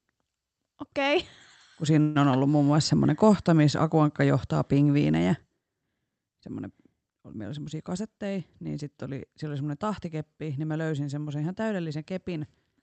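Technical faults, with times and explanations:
2.01–2.17 s, call audio freeze: just before "on ollut muun muassa" the sound stalls for about 0.14 s, carried on as a fading buzz or hiss rather than dropping to silence. This likely comes from packets held up in transit emptying the jitter buffer. Nothing is lost afterwards, just delayed, unlike a dropout that cuts material away.
12.11–12.82 s, jitter buffer speed-up: after "mä löysin semmoisen ihan" the speech runs about 5% faster while its pitch stays put, so it sounds slightly hurried. The receiver trimmed a few tens of milliseconds of pitch periods to shrink an overfull buffer, which is different from a resampling speed change that would also raise pitch.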